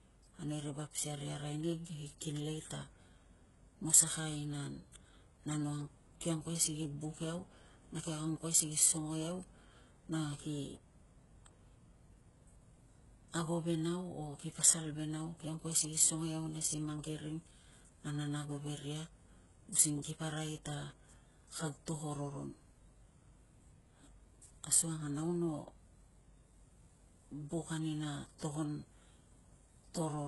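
HE-AAC compression runs throughout the speech. Nothing reaches above 11.5 kHz, and the treble sounds heavily damaged, gritty and lispy on s sounds. This likely comes from spectral band replication, which copies lower bands upward at a bitrate that sounds around 12 kbps.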